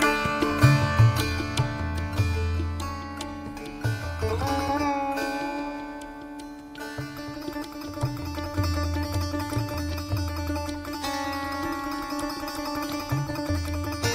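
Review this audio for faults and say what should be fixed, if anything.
No faults found on review, and nothing needs fixing.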